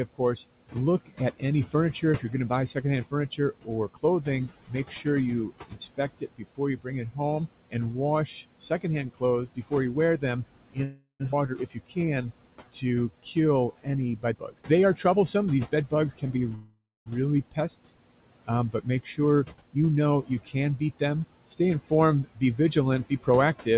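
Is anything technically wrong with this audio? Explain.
Yes. The speech has several faults, some present throughout and some at specific moments.

Mains buzz runs through the whole clip. Switching spikes from a dimmer, rectifier or poorly shielded line leaked into the signal twice per 50 Hz cycle, producing harmonics far up the spectrum. The result is a steady, raspy buzz, faint at roughly 40 dB below the speech.

Noise suppressor artifacts are also constant. The suppressor pulls down, frame by frame, whatever bands it judges to be steady noise, cutting them by about 18 dB. The background drops in pauses and swells under the speech.

Speech is cut by the noise suppressor from 0.15 s to the end. Because the processor mistook parts of the speech for noise, soft consonants and word endings were lowered along with the background, by up to about 18 dB at worst, so they sound swallowed or faint.

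Call audio freezes occur at 10.84 to 11.22 s and at 16.55 to 17.08 s. The likely cause is delayed packets draining the jitter buffer, so the receiver stretched the last sound for 357 ms and then 510 ms. Each fades into silence (130 ms, then 270 ms) before the speech resumes with nothing lost.

A skip ahead follows at 11.32 to 11.35 s. Roughly a fifth of a second of audio was discarded while later packets waited, and the two sides are spliced almost directly, so the speech lurches forward with part of its content gone.

Jitter buffer slow-down runs from 11.71 to 13.73 s. To rebuild its reserve after running low, the receiver repeated individual pitch periods, adding 241 ms. The speech plays at 88% speed without a pitch change, with drawn-out sounds.

Jitter buffer speed-up happens from 14.32 to 16.38 s at 117% speed, removing about 400 ms, and again from 19.02 to 20.44 s at 109%, removing about 150 ms. 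The buffer trimmed short pitch-period slices to shed excess delay, so the speech sounds hurried at unchanged pitch, over a telephone-band signal that stops near 4 kHz.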